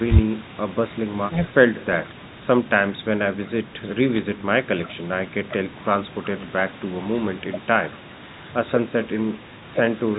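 Bit errors on a digital phone line hit this speech clip from 4.15 to 4.19 s: a short burst of corrupted samples over the unchanged speech. Each flipped bit corrupts one logarithmically coded sample, and the error rate here was roughly a few bits per thousand.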